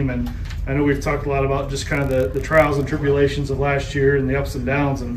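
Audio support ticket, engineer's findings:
Block size mismatch (padded), 1.67–2.89 s: steady 43.1 Hz buzz, pitch normal, speed essentially unchanged (0.999x). Short writer blocks zero-padded to a reader block that fits 1024 samples. Strictly periodic, unlike irregular buffer-underrun dropouts.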